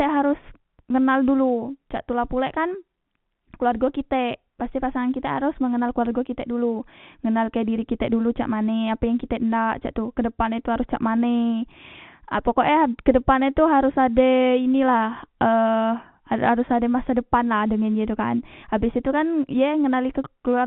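No technical faults can be heard in this speech recording. It comes through G.711 telephone coding, so nothing above 4 kHz is present, and any quantisation noise riding under the signal is faint at most.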